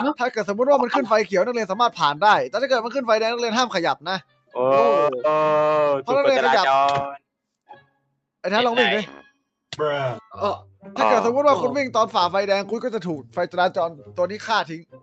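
From 4.22 to 4.55 s, the noise suppressor mistakes part of the sound for noise and cuts it, by about 12 dB at its deepest, for roughly a fifth of a second. The waveform's envelope dips there, and the spectrogram shows energy fading.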